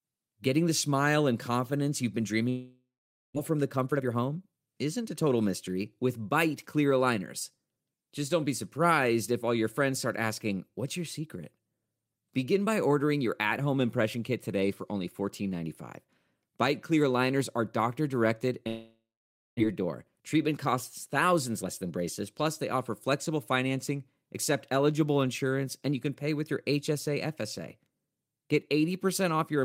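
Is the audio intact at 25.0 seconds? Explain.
Yes, the speech at 25.0 seconds is intact, with no audible fault at that moment.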